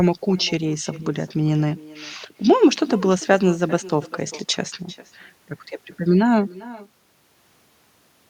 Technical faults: echo with no canceller

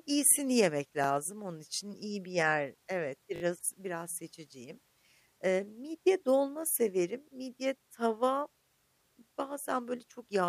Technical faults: repeated buffer

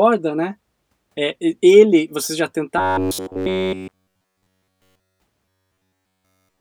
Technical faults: robotic sound from repeated short buffers

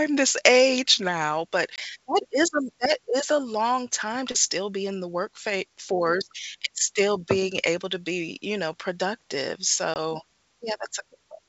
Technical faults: packet loss on an ADPCM call

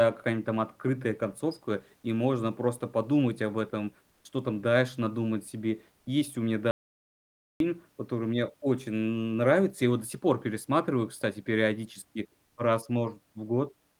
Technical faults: audio dropout to silence; comfort noise in place of the background

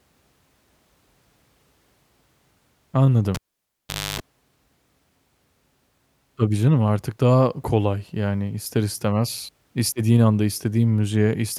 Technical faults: cable pulled and plugged in

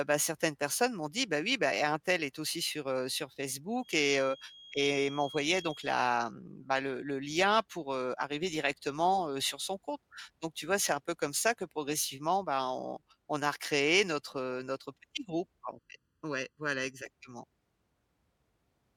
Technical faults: channel delay (comb filtering)

